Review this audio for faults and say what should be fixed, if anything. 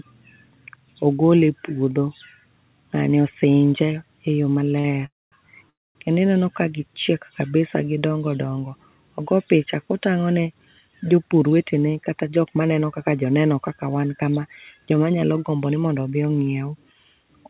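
Right after "osinje eyoo", a short stall from a late packet occurs at 4.80–4.86 s. A packet missed its slot and the jitter buffer ran dry. The receiver stretched the last sound by 41 ms to bridge the wait, then resumed where it left off. Nothing is lost. The syllable just hangs a moment too long, with a slight buzz or dip. Prevention: give the jitter buffer a little more headroom against brief network delay spikes.

Two call audio freezes follow, at 5.06–5.34 s and 5.70–5.97 s. Each inserts about a quarter second into the audio, 257 ms and 253 ms. The last sound smears briefly, then falls silent for 210 ms and 240 ms. Speech then continues from the same point, so nothing is dropped. The cause is likely packets held up in transit, which emptied the buffer. Prevention: fix the congestion or routing that is delaying packets.

A jitter buffer speed-up runs from 11.17 to 13.39 s, ending just before "kaka wan kama". 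The buffer held more audio than its target. The receiver trimmed tiny pitch-period slices again and again, about a fifth of a second in total. Speech plays at 110 % speed with unchanged pitch, so it sounds hurried. Prevention: steady packet delivery, so delayed packets do not arrive in bursts that force catch-up.

The call path passes nothing above 4 kHz, which fits G.711 A-law at 64 kbps.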